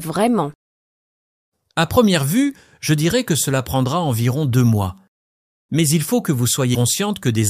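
At 6.74 to 6.76 s, damaged data in the compressed stream makes the decoder lose frame sync. It searches for the next header, producing a brief chirp, squawk, click or short hole.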